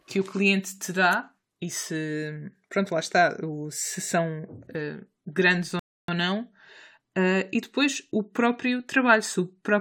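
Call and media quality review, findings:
Speech drops to silence right after "eh grandes", 5.79–6.08 s, then resumes at the exact word position, nothing skipped. Rebuffering stall: playback buffer ran dry, player paused until more data arrived, adding about 0.29 s of dead air.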